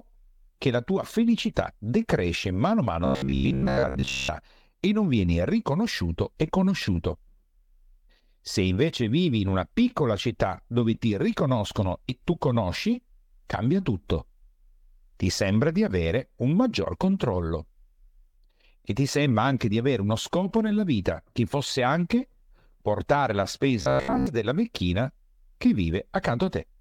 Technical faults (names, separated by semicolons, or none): robotic sound from repeated short buffers